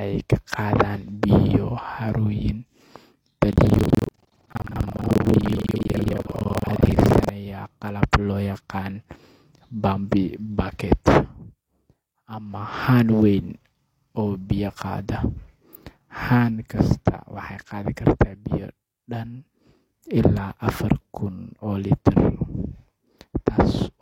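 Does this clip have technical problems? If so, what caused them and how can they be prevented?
Yes. From 3.48 s to 7.31 s the speech has buffer tearing: a hard, robotic rattle at 21.5 Hz that sounds only while signal is present. The writing program and the playback hardware have slipped, so their positions cross inside every buffer. About half of each block replays audio from roughly a fifth of a second earlier, with abrupt joins on both sides. The buzz rate fits a 2048-sample buffer. Keeping the writer locked to the hardware clock, with enough headroom that the write position never laps the read position, prevents it.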